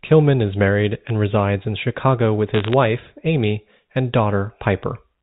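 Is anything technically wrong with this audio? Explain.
Yes. From 2.54 to 2.73 s there are bit errors on a digital phone line. Flipped bits corrupt individual samples in the 8-bit telephone stream, giving sharp ticks and brief crackle at an error rate of roughly half a percent. Unlike dropouts, the speech underneath continues unbroken. Only isolated samples jump, inside the normal 4 kHz telephone band.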